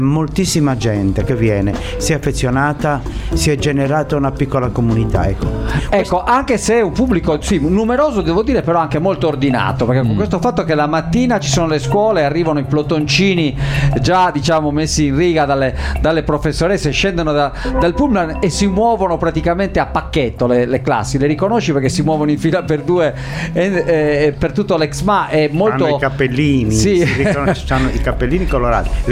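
Nothing in this audio stands out as technically wrong; there's no fault to point to anywhere along it.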